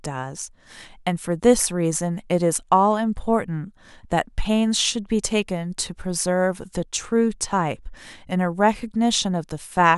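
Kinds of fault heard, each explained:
No faults detected; the speech recording shows no audible defects at any point.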